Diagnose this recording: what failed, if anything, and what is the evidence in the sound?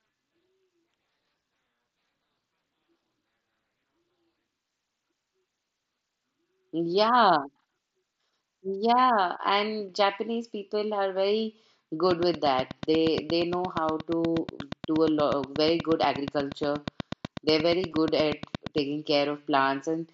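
From 12.11 to 18.79 s a train of clicks ticks over the speech at a steady 8.4 per second, around fifty near-identical pops standing well above the speech level and just as audible in the pauses. The regular spacing and constant shape point to the analogue wiring stage, most likely interference from nearby equipment coupling into the line or a faulty connection or power supply. Nothing in the program material would produce such a metronomic pattern.

At 17.91 s there is a brief dropout. This is concealed Bluetooth headset packet loss at the network stage, about 15 ms missing, consistent with two dropped packets between headset and phone. The receiver filled the gap by repeating the closest-matching slice of the preceding waveform, so the loss is mostly hidden and falls among the clicks. The mSBC headset codec's light graininess on loud syllables is audible throughout.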